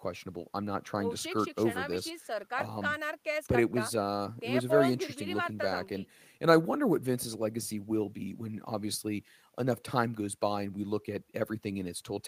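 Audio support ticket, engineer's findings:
Listened through the speech recording in full: nothing stood out, no findings to log.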